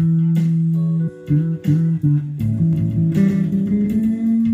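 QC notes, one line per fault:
1.07–1.09 s, damaged data in a compressed stream: a short, harsh blip cuts through the sound for roughly 24 ms. Part of the compressed data at this point was wrong, so the decoder misread the affected frames, lost its place in the stream and had to hunt for the next valid frame header before normal playback resumed.
2.73 s to end, doubled audio track: from 2.73 s a second copy of the sound suddenly appears, trailing the original by around 150 ms and sitting about 5 dB lower. It stays to the end. It is full-band and dry, with no decay or room colour, so it comes across as a flat slapback rather than a natural echo. This likely comes from the same signal being mixed in twice, either captured again by a slower path or left as an out-of-step duplicate during editing.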